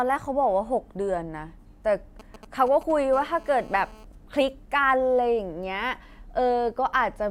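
From 2.20 to 2.92 s, GSM signalling bursts break in. A nearby 2G phone exchanging signalling sends short groups of radio pulses that the audio circuit rectifies, giving a galloping dit-dit-dit of brief 217 Hz buzzes roughly 20 dB below the speech. A spectrogram shows clustered vertical stripes with harmonic combs, and the waveform shows spiky packets.

From 3.13 to 4.05 s comes GSM phone buzz. The phone, now in a call, transmits continuously at 217 bursts per second, and the rectified pulses form a hard, raspy buzz about 24 dB below the speech. On a spectrogram it is an unbroken ladder of harmonics spaced 217 Hz apart, and the waveform shows a regular pulse train.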